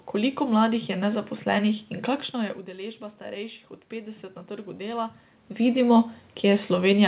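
A speech recording over a narrowband call path, with everything above 4 kHz gone, in which automatic gain rising sets in from 2.37 to 5.23 s. After the input drops by about 15 dB, the gain control slowly lifts the level by about 4 dB, and voice and room noise swell together. That shared, gradual rise is what distinguishes it from the talker simply coming closer, which would raise only the voice.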